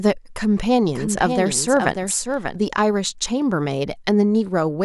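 A doubled audio track runs from 0.84 s to 2.56 s: a second, full-band copy of the speech trails the original by about half a second, sitting roughly 5 dB lower. The copy carries no reverberant tail or room colouring, so it reads as a detached repeat, and it cuts in and out abruptly at both ends. The likely cause is the signal being picked up again through a slower path, or an edit leaving two offset copies in place.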